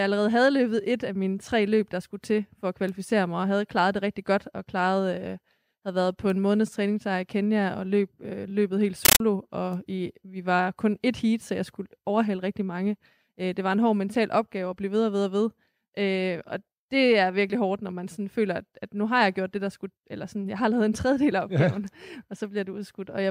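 From 9.05 to 9.20 s, loud chattering static replaces the speech. This is a compressed stream played as audio: 13.3 ms noise bursts repeating 31.25 times a second, consistent with undecoded AC-3 data.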